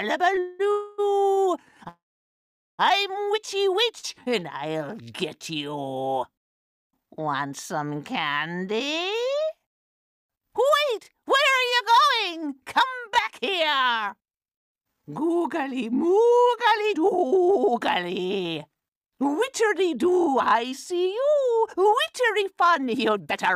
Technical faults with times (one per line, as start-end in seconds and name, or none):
0.35-1.39 repeated stalls (stutter)
0.71-1.00 call audio freeze
1.89-2.81 call audio freeze
3.99-4.05 short stall from a late packet
4.14-5.01 jitter buffer slow-down
6.93-9.22 jitter buffer speed-up
14.40-23.55 jitter buffer speed-up